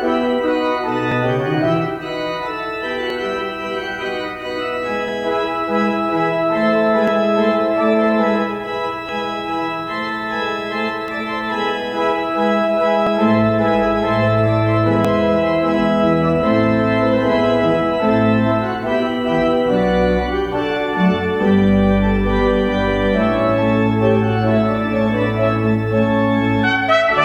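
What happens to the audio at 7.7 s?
Nothing goes wrong at 7.7 s; the audio plays through that moment intact, with no dropout, click or distortion.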